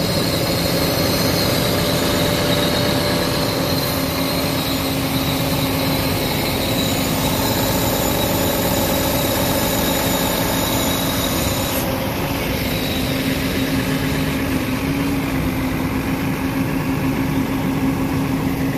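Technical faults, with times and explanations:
No technical faults can be heard anywhere in this recording.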